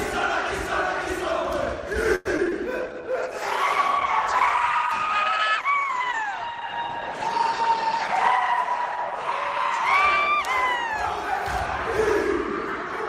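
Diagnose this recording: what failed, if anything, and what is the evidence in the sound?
Repeated packet loss (robotic sound) at the network stage, from 2.15 to 2.53 s. Four gaps, the longest 98 ms, leave the sound choppy. The receiver filled each hole by extending the last sound, so about 36% of that span is synthetic.

A call bitrate drop at the codec stage runs from 2.81 to 12.90 s. The bandwidth estimate collapsed, pushing the encoder from 96 to 14 kbps, with the lowest rate held for about 5.3 s. Coarser coding and lost high frequencies make the sound rough and muffled.

A jitter buffer slow-down in receive-side buffering occurs from 2.88 to 3.14 s. The buffer repeated pitch periods to rebuild its reserve, adding 42 ms and playing at 87% speed. That stretch sounds drawn out at unchanged pitch.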